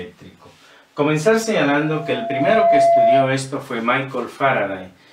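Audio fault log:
1.71–3.31 s: loudspeaker feedback squeal. A single tone at 678 Hz rises out of the sound, swelling over roughly a second until it sits about 5 dB above the programme, then stops at 3.31 s. A microphone is hearing its own loudspeaker, and at 678 Hz the round trip gains more than it loses, so that one frequency feeds itself. The gradual self-sustaining swell at one fixed pitch separates it from a steady hum or an electronic whine.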